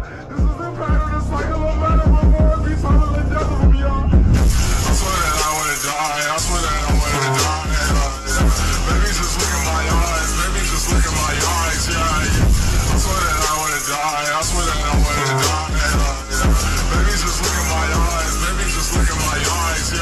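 No technical faults are audible.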